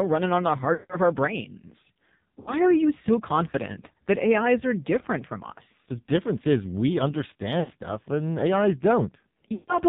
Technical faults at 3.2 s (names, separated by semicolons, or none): AMR narrowband mobile codec